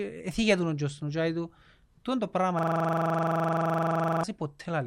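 Right after "του είναι το πράγμα", at 2.59 s, the speech hits a system hang loop until 4.24 s. The machine stalled while the hardware kept replaying one 42.7 ms slice, which fits a 2048-sample buffer, giving a rough, machine-gun stutter around 23.4 Hz.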